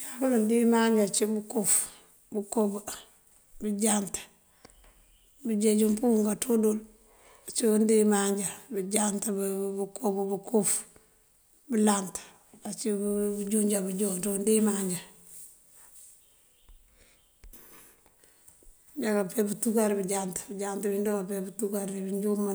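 No technical faults can be heard in this speech recording.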